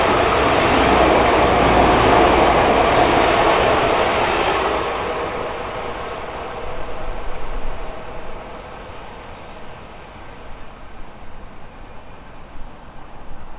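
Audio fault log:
No faults found; the audio runs over a call path with nothing above 4 kHz, the narrowband limit that fits a G.711 A-law stream at 64 kbps.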